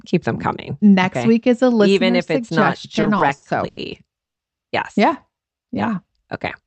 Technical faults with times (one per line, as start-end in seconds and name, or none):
2.95-3.79 repeated stalls (stutter)
4.25-4.40 call audio freeze
5.31-5.96 jitter buffer slow-down